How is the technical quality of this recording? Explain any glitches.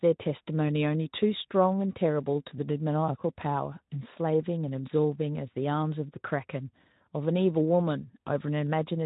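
The technical quality holds up, and there are no glitches in this recording to explain.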